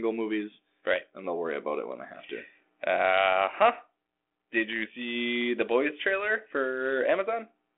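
No technical faults are audible.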